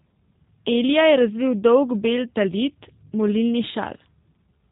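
From start to finish the speech carries G.729 codec damage, plainly audible and consistent with an 8 kbit/s coder. Each short frame is rebuilt from a vocal tract filter, pitch predictor and sparse pulses, so it sounds rough and synthetic. A spectrogram shows a hard ceiling at 4 kHz.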